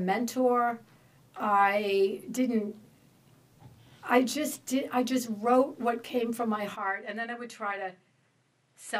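At 6.76 s the sound abruptly turns duller and roughly 10 dB quieter, with nothing above 11.5 kHz and a new faint noise floor, likely an input switched to a poorer device.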